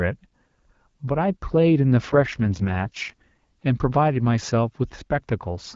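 From 2.12 to 3.66 s the speech turns rough and raspy, which points to an AMR rate drop from 12.65 to about 6.6 kbit/s on a weakened link. Unlike a bandwidth fallback or packet loss, the HD Voice band stays intact and nothing drops out.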